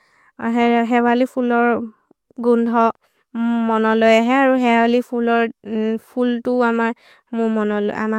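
No technical faults are audible in this speech.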